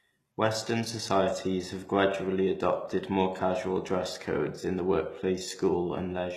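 Throughout this speech clip the treble sounds bright but synthetic, with s sounds coming out gritty and lispy. The likely cause is HE-AAC compression at a low bitrate, around 16 kbps, where the upper band is rebuilt from copied lower bands whose harmonics no longer line up.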